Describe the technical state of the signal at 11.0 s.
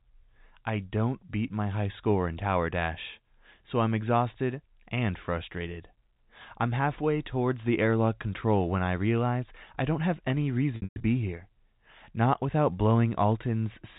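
Packet loss with pitch repetition, 10.76 to 11.04 s: about 220 ms of audio is missing across 280 ms, bridged by repeating the last pitch period, which fades out.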